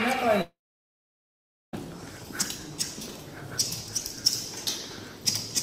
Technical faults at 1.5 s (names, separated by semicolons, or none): long network dropout